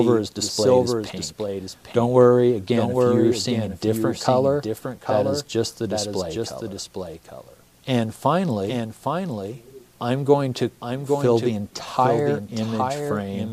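From start to finish there's a doubled audio track: a second copy of the whole sound trails the original by roughly 0.7 seconds, sitting around 5 dB quieter. It's full-band and bone dry, with no decay or room colour, so it reads as a clean, out-of-step duplicate rather than an echo. It's likely the same signal being picked up a second time through a slower path, so everything lands twice.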